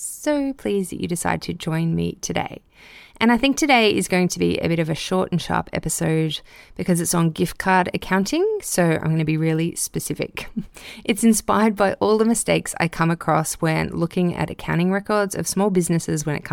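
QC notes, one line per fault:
No faults found in this clip.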